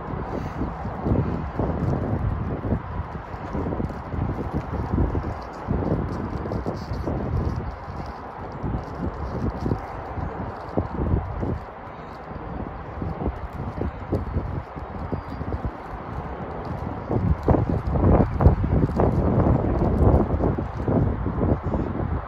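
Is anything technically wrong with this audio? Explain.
No, nothing stood out as a technical problem on listening to this audio.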